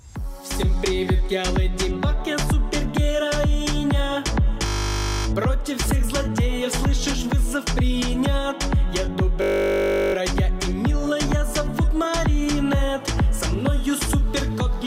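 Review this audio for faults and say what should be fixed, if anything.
System hang loop at 4.66–5.26 s and 9.42–10.14 s: the same 20 ms of audio repeats, giving a steady 50 Hz buzz while the driver stalls and the hardware recycles its buffer. Essentially no audio is lost. To prevent it, fix the driver or system stall.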